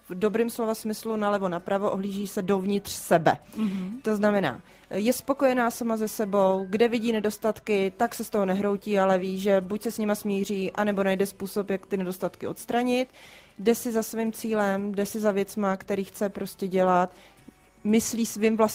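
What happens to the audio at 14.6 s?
Nothing goes wrong at 14.6 s; the audio runs through that moment intact, with no dropout, click or other audible fault.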